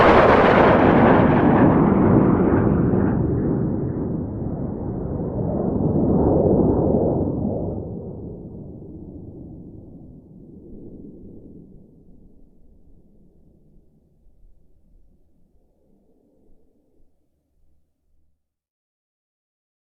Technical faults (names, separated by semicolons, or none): doubled audio track